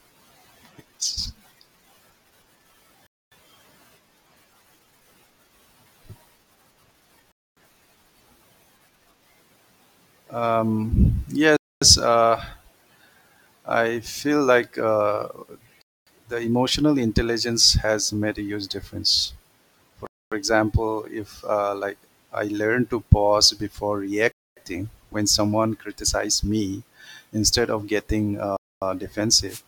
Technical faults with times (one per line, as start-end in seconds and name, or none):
3.07-3.32 gap between chunks
7.32-7.57 gap between chunks
11.57-11.82 gap between chunks
15.82-16.07 gap between chunks
20.07-20.32 gap between chunks
24.32-24.57 gap between chunks
28.57-28.82 gap between chunks
29.47-29.62 wireless microphone noise hit